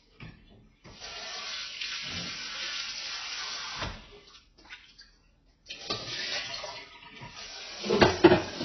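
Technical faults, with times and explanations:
Throughout: AAC compression. Nothing above 6 kHz and a dull, smeared, warbling texture with heavy codec damage, likely AAC-LC at a very low rate around 16 kbps, where the encoder drops the top band and coarsely quantises the remaining spectrum, leaving gaps.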